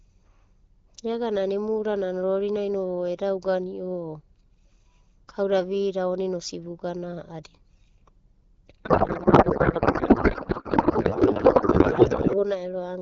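From 8.83 to 12.44 s, a codec payload misread turns the speech into garbled, warbling noise. The decoder misplaces the AMR fields, likely from mismatched octet-aligned framing.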